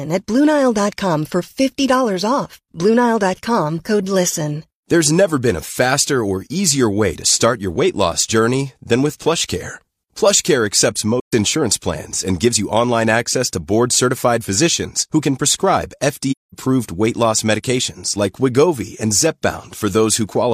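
The speech fades into brief silent gaps from 11.20 to 11.33 s and from 16.31 to 16.55 s, about 130 and 210 ms long. This is AAC frame loss with muting: the decoder zeroed the missing frames, roughly three and five, and overlapping windows softened both edges.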